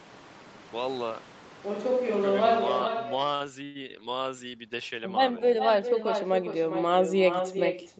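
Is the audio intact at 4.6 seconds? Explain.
No. An echo with no canceller runs through the whole clip. The far loudspeaker feeds the microphone, so a thinner copy trails the sound by roughly 400 ms, about 8 dB down.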